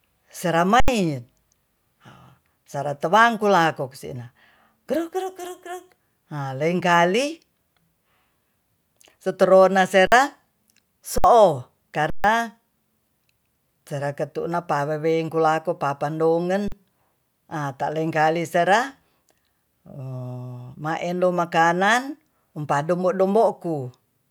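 The output buffer ran dry five times, at 0.8, 10.07, 11.18, 12.1 and 16.68 s, and the converter held its last sample. This is an underrun with held sample: the speech flattens abruptly for 40 to 140 ms, a similar stretch is lost, and then it resumes.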